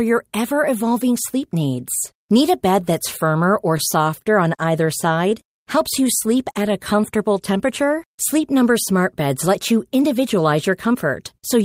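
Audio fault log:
4.23 to 4.28 s, short stall from a late packet: a packet arrived late and the jitter buffer ran dry, so the receiver held the last sound for about 22 ms until the packet arrived, then carried on from the same point. Nothing is lost, but the sound hangs slightly too long. On a spectrogram the harmonics run as flat, unchanging bands across that short stretch, and the waveform shows a few near-identical repeated cycles where it should be evolving.
4.64 to 5.33 s, scattered short gaps: roughly four isolated packets went missing or arrived late across this span, and the receiver filled each small hole by extending the sound just before it. Each patch lasts no more than about 10 ms and together they cover about 40 ms, a small share of the stretch. Brief ticks or tiny smears are heard. A spectrogram shows a few thin vertical seams where detail briefly freezes, and the waveform shows slight discontinuities at each splice.
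5.44 to 7.34 s, jitter buffer slow-down: the buffer was low, so the receiver built up a reserve by repeating single pitch periods and slivers of pauses, adding about 93 ms. The speech plays at about 95% speed with unchanged pitch, so syllables and gaps stretch out and a slight warble may appear. On a spectrogram the harmonic bands stay at the same height while their features widen in time. The waveform shows runs of duplicated periods.
9.48 to 10.95 s, jitter buffer speed-up: the buffer held more audio than its target, so the receiver trimmed short pieces of one or a few pitch periods again and again, removing roughly 100 ms. The speech runs at about 105% speed without any pitch change and sounds slightly hurried. A spectrogram shows harmonics at the usual heights but with syllables and pauses squeezed closer together. In the waveform, periods are dropped at the joins, which shortens the pauses.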